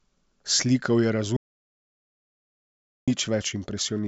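Speech with an audio dropout to silence from 1.37 to 3.08 s. The sound cuts off mid-flow and returns abruptly, and about 1.71 s of material is lost, likely because the input was briefly disconnected or muted while the recorder kept writing silence. Unlike a natural pause or a noise gate closing, the gap is silent with no room tone and no fade at either edge. The band-limited telephone character, with nothing above about 7.7 kHz, continues on both sides of the gap.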